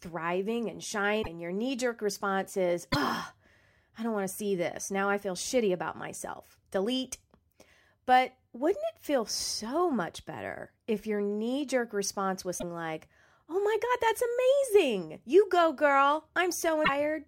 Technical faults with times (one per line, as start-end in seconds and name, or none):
1.22-1.27 broken MP3 bit reservoir
2.91-2.96 broken MP3 bit reservoir
12.58-12.64 broken MP3 bit reservoir
16.84-16.89 broken MP3 bit reservoir